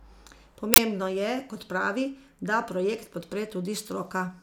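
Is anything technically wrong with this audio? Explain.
Yes. At 0.74 s a harsh, loud burst of digital noise cuts through the speech for 40 ms, ending at 0.78 s. This is an uninitialised buffer: a block was played before any audio was written into it, so whatever leftover memory it held was output as samples.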